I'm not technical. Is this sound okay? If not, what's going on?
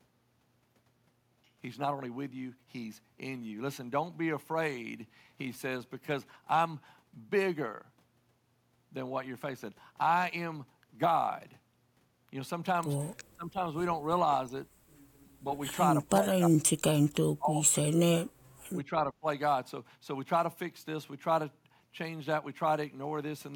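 No. Between 13.35 and 19.26 seconds the speech repeatedly sinks or partly drops out. The worst stretches are 16.03 to 16.7 and 17.35 to 18.03 seconds, with another at 13.35 to 13.75 and 18.75 to 19.26, and brief dips at 14.46 and 15.41. This is speech suppressed in double talk. The likely cause is both people talking at once, so the call's echo canceller mistook this talker for echo and turned them down.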